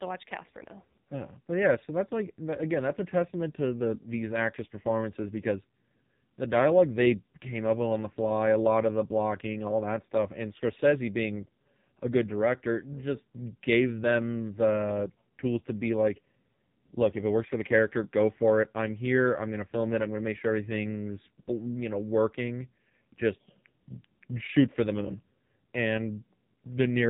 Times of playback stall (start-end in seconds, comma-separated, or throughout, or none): none